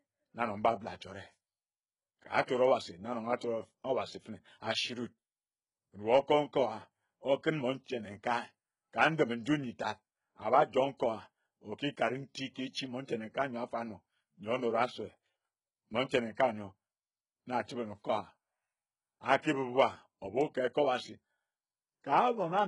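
All the way through, the speech has heavy artefacts of likely HE-AAC compression: treble rebuilt from copied lower bands, gritty lispy s sounds, nothing above 11.1 kHz, fitting roughly 12 kbps.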